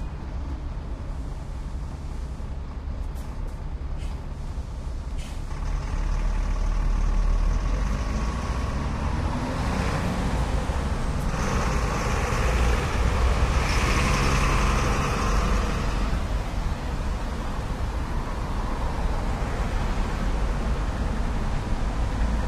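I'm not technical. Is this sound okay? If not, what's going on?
No. From 14.87 to 20.39 s there's a call bitrate drop: the connection suddenly had less room, so the audio was squeezed into far fewer bits. For about five and a half seconds the sound turns rough, watery and muffled, losing its crisp top end.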